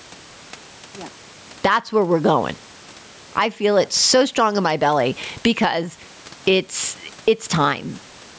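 Speech with gain pumping throughout, with a gain swing of around 15 dB; the faint room noise sits about 40 dB below the voice. The pumping is likely from excessive input gain feeding a fast limiter. A noise gate would instead cut the background off abruptly.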